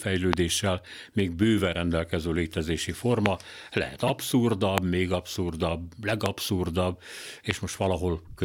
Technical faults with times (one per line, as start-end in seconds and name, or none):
0.33-0.35 loud pop
3.26-3.28 loud pop
4.07-4.10 repeated frames
4.78-4.80 loud pop
6.26-6.28 loud pop
7.51-7.53 loud pop